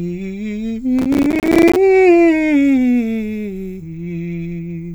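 Processor overload crackle, 0.99 to 1.76 s: around 5 ms buffers repeatedly missed deadlines, leaving dozens of silent gaps heard as gritty crackle.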